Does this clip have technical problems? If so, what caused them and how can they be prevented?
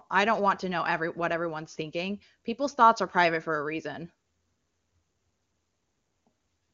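No, this speech clip has no technical faults to fix. It carries the clear sound of AMR wideband (HD Voice) coding, which fits the codec's highest rate.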